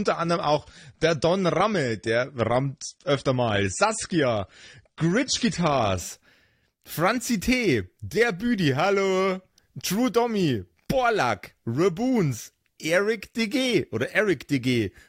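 Speech, with an adaptive stream starting at a low bitrate. For the first 6.0 seconds the sound is dull and smeared. Nothing is heard above about 9.7 kHz, and codec artefacts are stronger. That fits an AAC-LC stream at around 32 kbit/s, picked so playback could begin fast. At 6.0 s the player has gauged the connection and moves up a tier. The change fits roughly 96 kbit/s. The treble returns suddenly, with no gap in the sound.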